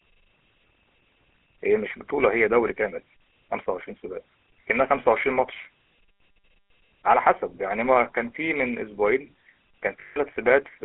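Throughout the recording, the speech passes through a GSM full-rate codec. The codec rebuilds the voice from a vocal-tract model driven by a regular pulse excitation, and its character fits the 13 kbps full-rate coder. The line passes only about 300 Hz to 3.5 kHz, so the sound is thin and boxy, with no low body or upper air. The coding damage is plainly audible as a buzzy, gravelly roughness on the voice.

From 10.0 to 10.17 s there are lost GSM frames. About 160 ms of the coded stream failed, consistent with eight 20 ms frames. The decoder filled the gap by repeating the last good frame's settings. Instead of a clean dropout, the voice freezes into a rough, metallic ring for a fraction of a second before normal decoding resumes.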